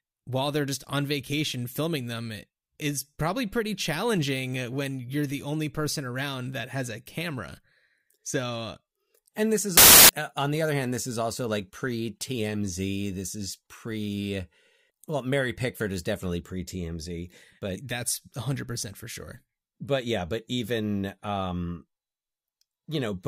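At 9.77 s the speech drops out into a burst of loud, harsh broadband noise lasting until 10.09 s, about a third of a second. That's samples built from the wrong bytes: the reader assembles each sample from misaligned or swapped bytes, so the jittery low-order bits end up as the big part of every value.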